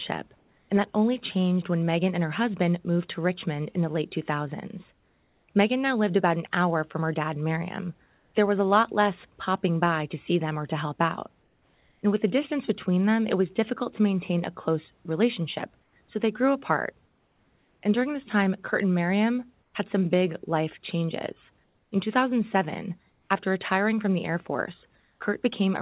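Speech over a narrowband call path with nothing above 4 kHz, showing comfort noise in place of the background in pauses at 0.38–0.7, 4.92–5.48, 8.06–8.34, 11.42–12.02, 15.82–17.82, 19.62–19.74, 21.64–23.3 and 25.0–25.2 s. There the room noise becomes flat, featureless hiss, about 1 to 4 dB quieter, likely from discontinuous transmission with synthetic noise filling silences.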